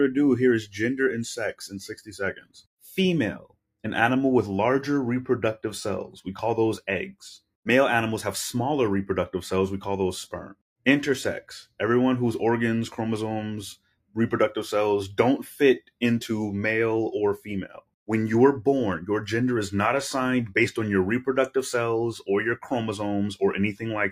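Across the whole clip a noise suppressor applied to music or sounds, built for speech, keeps misreading steady tones and decaying tails as noise. Its gain moves by roughly 5 dB, so the sound gently pumps and thins: sharp onsets come through while sustained parts sink. On a waveform the envelope breathes between attacks. On a spectrogram sustained bands fade and tails end early instead of tapering smoothly.

On top of that, there are five deeper episodes of sound cut by the noise suppressor. At 2.0 to 2.17 s the level drops by about 17 dB. At 2.33 to 2.84 s, 3.39 to 3.82 s, 13.76 to 14.17 s and 17.68 to 18.09 s it falls by about 21 dB, for a few hundred milliseconds each. These sound like sudden dips where held material almost vanishes. On a waveform they show as abrupt notches in the envelope, and on a spectrogram as dark vertical gaps through the steady content.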